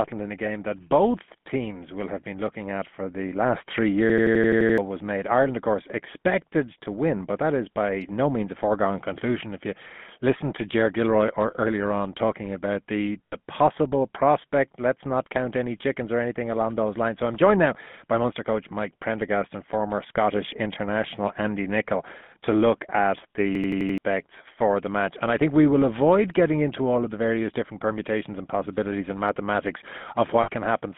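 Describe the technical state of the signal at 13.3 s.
Lost GSM frames from 13.26 to 13.36 s: a gap of about 60 ms, consistent with three 20 ms frames, was filled by repeating the last good frame, leaving a rough metallic ring. Underneath, the GSM full-rate codec rebuilds the speech from a vocal-tract model and sparse pulses, limiting the band to roughly 150 Hz to 3.5 kHz and adding a plainly audible buzzy, gravelly roughness.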